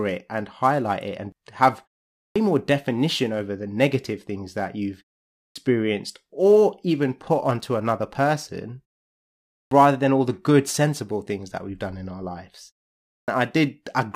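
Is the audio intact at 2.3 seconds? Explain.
No. A clipped start after a pause swallows 2.2 to 2.36 s. After a 0.41 s silence, the sleeping output device wakes late. About 160 ms of speech is lost, so the word begins abruptly.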